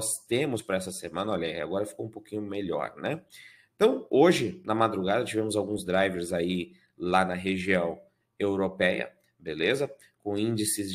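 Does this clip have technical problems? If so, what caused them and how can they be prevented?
Yes. At 0.58 s there are compressed frames skipped: the playback jumps forward by roughly 50 ms, which fits about two frames of 23.2 ms each being lost. The decoder either never received those frames or discarded them as corrupt, so their audio never plays. To prevent it, verify file integrity after transfer and use error-protected storage or transport so that no frames arrive damaged or missing.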